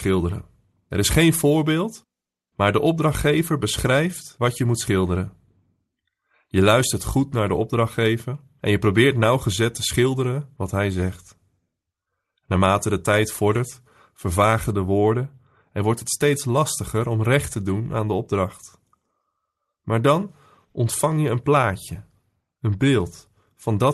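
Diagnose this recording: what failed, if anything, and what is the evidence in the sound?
Nothing failed; the call path is working normally.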